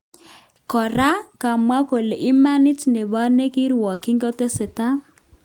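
A run of consecutive voice packets failed to arrive in time in this speech recording, a burst of packet loss spanning about 3.93 to 4.03 s. With nothing to play, the receiver stretched the last received sound across the hole for 80 ms, letting it sag in level, so a brief held buzz or fading hiss replaces the real audio. When playback picks up again, 80 ms of speech is simply gone, leaving a jump.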